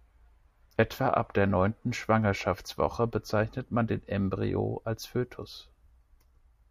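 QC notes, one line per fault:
No fault was found in this speech clip. Nothing here needed a QC line.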